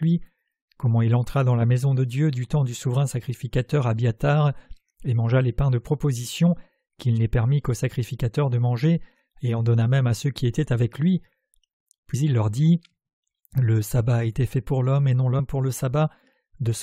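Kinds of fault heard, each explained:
Compressed frames skipped: at 12.13 s and again at 15.38 s, the audio jumps ahead by about two frames, roughly 50 ms, which fits a 23.2 ms frame.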